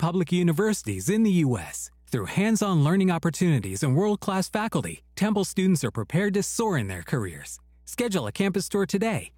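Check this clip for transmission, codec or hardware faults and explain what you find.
There's one fault here: mains hum, running through the whole speech clip. It's a steady low tone sitting at 60 Hz, something like 30 dB below the speech, so it hangs underneath everything rather than competing with it. The usual story is that the power line gets coupled into the signal path, either through a ground loop in the cabling or from a transformer sitting close to the gear.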